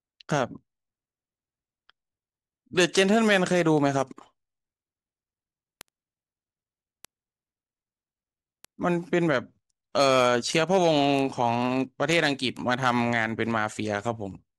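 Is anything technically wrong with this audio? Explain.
Yes. Word clock ticks run through the speech from about 0.15 s to 14.53 s. A receiving device is clocked independently of the digital source, and the two clocks drift apart by roughly 300 ppm. Each time they slip past one another, a single sample is dropped or repeated. This produces about two hundred sharp ticks of uneven strength, spaced roughly every 0.07 s. Unlike random dropouts or clicks, they keep a steady rhythm that ignores the content.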